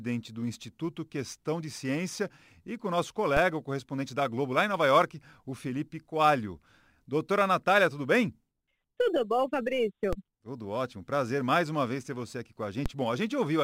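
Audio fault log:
3.37 s, 10.13 s and 12.86 s, DC step: Each moment brings a short low thump under the speech, while the speech itself continues unchanged. At each point the waveform's zero line jumps abruptly by about -19 dBFS (about -18 dBFS at 12.86 s). The sudden shift carries low-frequency energy that is heard as the thump. The offset then drains away as if through a high-pass near 20 Hz, so no lasting click remains.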